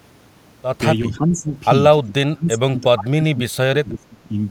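The speech dips three times, consistent with speech suppressed in double talk. From 1.01 to 1.51 s the level sinks by around 10 dB. From 2.04 to 2.78 s it falls much deeper, near 30 dB, almost vanishing. From 2.94 to 4.34 s it drops by about 30 dB again for well over a second. The likely cause is an echo canceller that mistook this talker for loudspeaker echo while the far side spoke, and turned both down.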